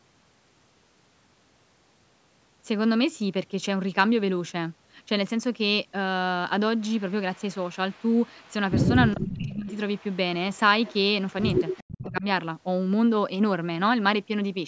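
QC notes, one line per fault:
7.0–8.53 s, 9.13–10.17 s, 10.53–10.96 s, 11.56–12.06 s: echo leak. A delayed copy of the speech returns 412 ms behind it, likely from a far-end loudspeaker whose canceller let pickup through. It is faint at first, roughly 30 dB down, and strongest near 9.1 s at roughly 10 dB down. On a spectrogram, fainter duplicate harmonic traces sit offset to the right.
9.13–9.68 s, 11.91–12.26 s: speech suppressed in double talk. The speech dips sharply, roughly 15 dB and then 25 dB at its deepest, for about half a second and a third of a second, likely because the canceller clamped down while both sides overlapped. The waveform envelope shows a sudden notch.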